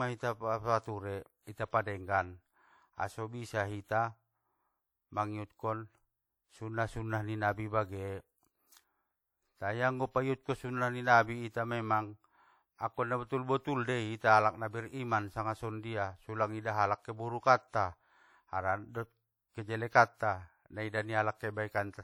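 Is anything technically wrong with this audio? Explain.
Yes. Throughout, the speech rings and smears with a hiss that breathes with the signal. This is likely WMA compression, consistent with about 48 kbps. Long transform blocks spread quantisation noise over tens of milliseconds. Unlike a band-limited codec, content still reaches 20.1 kHz.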